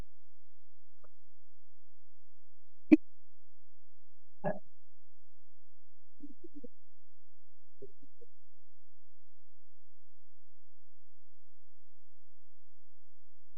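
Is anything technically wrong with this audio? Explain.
Yes, the speech carries a DC offset for its whole length, a constant shift of about -32 dBFS that moves the waveform off the zero line. It isn't audible itself but eats headroom, and a spectrogram shows a steady band of energy at 0 Hz.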